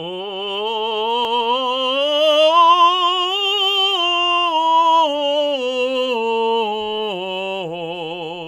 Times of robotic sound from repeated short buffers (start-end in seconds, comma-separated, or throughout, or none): none